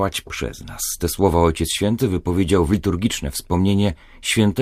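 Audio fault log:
Nothing stood out on listening to this speech recording.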